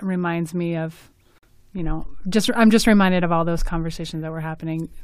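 It's a speech clip with two faults. At 1.38 to 1.45 s there's an abrupt 66 ms hole, a corrupt frame muted: damaged compressed frames were rejected and replaced with silence, which fits roughly three frames. Then a DC step: at 1.79 s the waveform's zero line jumps and you hear a low thump, and the offset lasts until 3.59 s, while the speech carries on unchanged.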